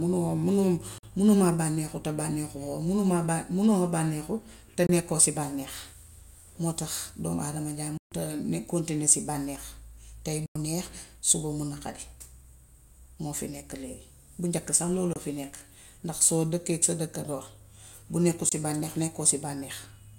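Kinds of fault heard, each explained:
Bluetooth dropout: The speech cuts to silence six times, at 0.98, 4.87, 7.97, 10.46, 15.13 and 18.49 s, for 23 to 139 ms. Each gap is a multiple of about 23 ms, likely lost wireless packets. Speech resumes as if it had played on.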